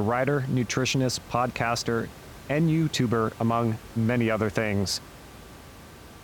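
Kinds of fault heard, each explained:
There are no kinds of fault heard, so there are none to explain.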